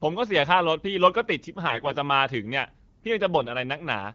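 From 1.68 to 1.96 s, and again from 3.38 to 3.50 s, AMR bit errors turn the speech hoarse and gargly. Flipped low-priority bits, around 5 and 4 percent, misplace excitation pulses and skew pitch, gain and spectral values, though pitch and level roughly hold.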